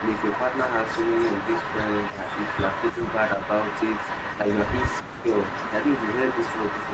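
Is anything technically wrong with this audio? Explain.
Yes, two faults affect this speech.

Echo leak, from 0.0 to 5.03 s: a delayed copy of the speech, about 0.3 s behind and only slightly quieter than the original, runs alongside it. The likely cause is a loudspeaker on the far end whose echo canceller failed to remove the returning signal.

Speech suppressed in double talk, at 2.11–2.21, 2.92–3.01, 3.36–3.41, 4.41–4.50 and 5.01–5.30 s: the speech briefly dips, by roughly 5 to 25 dB. This likely happens because the canceller cannot tell the talker from the echo and attenuates both while they overlap.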